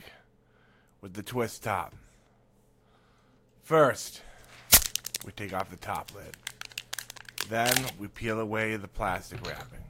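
No technical faults can be heard in this recording of sounds. Nothing at any point in the audio points to a problem.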